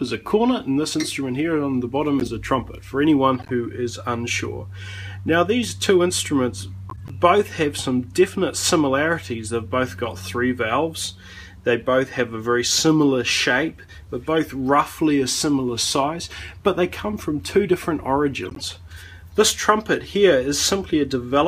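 Damaged compressed frames were decoded as if intact, so each corrupt frame decoded put misplaced energy into the output: short chirps and noisy blips at 2.19 to 2.28 s, 3.39 to 3.51 s, 6.89 to 7.11 s, 14.37 s and 18.45 to 18.62 s. Each burst spans what sounds like a handful of frames. The loudest, at 2.19 s, peaks at about -15 dBFS, and the others sit near -20 to -25 dBFS.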